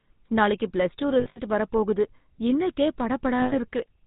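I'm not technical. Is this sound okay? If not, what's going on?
No. The whole clip has passed through the GSM full-rate codec, the old mobile-phone coding. Nothing above 4 kHz gets through, so the speech sounds muffled, with a buzzy, gravelly roughness. Unlike simple muffling, this grit comes from the codec rebuilding the voice from pulses.

There are also lost GSM frames at 1.2 to 1.39 s, just after "நாளைக்கு ப்ளஸ் டூ" and before "வரப் போகுது இன்னைக்கே", and at 3.42 to 3.56 s, after "வரப் போகுது இன்னைக்கே". In each, the last good sound is held as a brief metallic ring instead of a clean gap or a click. The first spot is broken into several short bursts.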